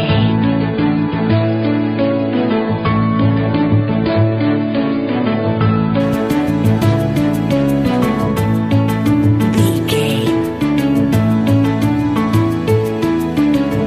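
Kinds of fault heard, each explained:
Adaptive stream starting at a low bitrate: the first 6 s play a thin rendition with nothing above 5 kHz, consistent with about 16 kbit/s AAC, then quality jumps without a gap.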